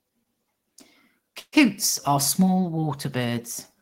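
Speech clip with a call audio freeze from 1.39 to 1.55 s, just before "are small": the sound stretches into a fading tone, then goes quiet, then resumes intact, likely a jitter-buffer underrun.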